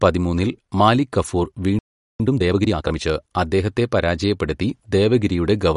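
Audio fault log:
throughout: MP3 compression, likely; plainly audible watery swirl, spectrogram shows nothing above 11.2 kHz and flickering sparse high bins, which fits a low bitrate around 48 kbps.
1.79–2.20 s: playback stall, likely; after "പതിമൂന്നില് മാലിക് കഫൂർ" the sound stops for 410 ms, a flat silent gap in the waveform, before resuming.
2.20–3.02 s: time-compressed catch-up; sound is hurried at 1.5 times speed with pitch unchanged until "അദ്ദേഹത്തെ പരാജയപ്പെടുത്തി", showing tightly packed syllable envelopes and small cross-faded joins.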